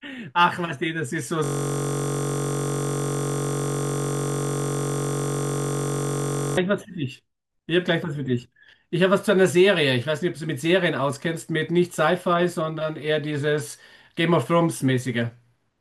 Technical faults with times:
1.44-6.57 system hang loop

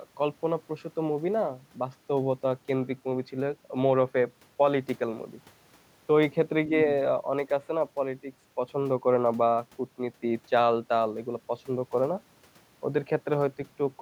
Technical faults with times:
none

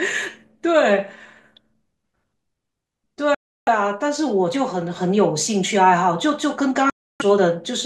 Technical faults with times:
3.35-3.68 Bluetooth dropout
6.90-7.22 Bluetooth dropout

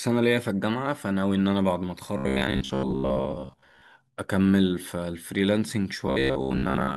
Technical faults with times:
2.17-3.82 robotic sound from repeated short buffers
6.07-6.97 robotic sound from repeated short buffers

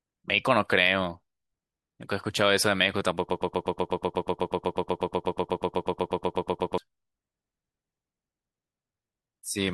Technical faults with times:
3.29-6.78 broken-record loop

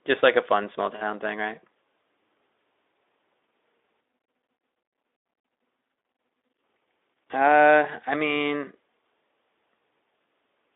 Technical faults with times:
none

